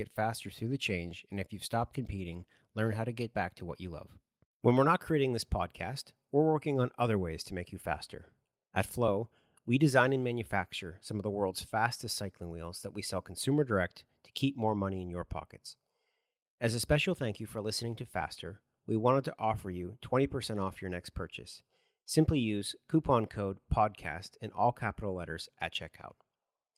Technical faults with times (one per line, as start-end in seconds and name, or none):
none